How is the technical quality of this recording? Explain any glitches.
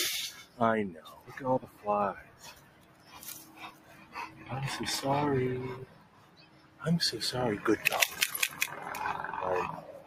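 The recording's quality is compromised by a speech-tuned noise suppressor that treats much of the material as noise.

Noise suppressor applied to music or sounds, throughout: a processor built to separate speech from background hiss is judging this audio by the wrong criteria. It reads sustained, stable energy as unwanted noise and pulls it down, while brief transients pass largely intact. The gain it applies swings by around 20 dB, so the level keeps breathing up and down instead of following the natural dynamics, and held material sounds thinned and unsteady.

Sound cut by the noise suppressor, at 0.43 to 0.59 s, 1.07 to 1.32 s, 1.64 to 1.85 s, 2.22 to 3.19 s, 3.41 to 4.5 s, 5.86 to 6.82 s, and 9.81 s to the end: in these stretches the suppressor misclassifies the sound as noise and attenuates it harder than elsewhere, by about 9 to 11 dB at the deepest. The short dips last a fraction of a second, the longer ones close to a second, and sustained or decaying sound sinks audibly or has its tail cut short.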